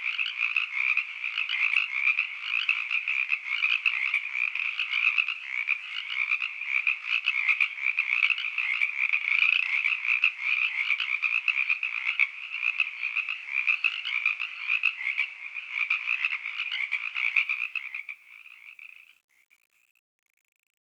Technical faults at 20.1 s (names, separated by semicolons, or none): truncation distortion on a fade